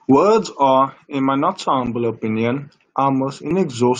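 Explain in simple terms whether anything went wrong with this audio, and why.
Yes. The speech has damaged data in a compressed stream. Bits of the stored file were corrupted, so the player misread those moments and had to resync. You hear this as very brief glitchy blips at 0.88 s and 3.51 s.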